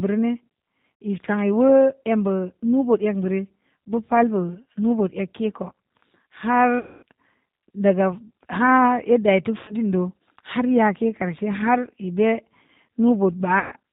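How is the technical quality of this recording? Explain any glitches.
Quality is limited: the whole recording carries plainly audible low-bitrate codec damage, and four short dropouts interrupt the speech.

G.729 codec, throughout: the speech sounds band-limited, with nothing above 4 kHz, and slightly rough and synthetic, which fits G.729A at 8 kbit/s. Rather than sending the waveform, this codec describes each 10 ms frame with a vocal-tract filter, a pitch predictor and a handful of pulses, and the decoder rebuilds an approximation. That is why it loses brightness and takes on a coarse, synthetic texture.

VoIP packet loss concealed by the speech codec, at 1.02 s, 6.79 to 7.03 s, 9.59 to 9.75 s and 13.59 to 13.72 s: the gaps cover about 60, 240, 90 and 120 ms of audio. The decoder fills each gap by repeating its last pitch and filter settings at falling gain, so the sound smears into a fading buzzy tone or coloured noise. 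The 240 ms gap is the longest. Because each frame depends on the one before, the speech stays weak or distorted briefly after every gap.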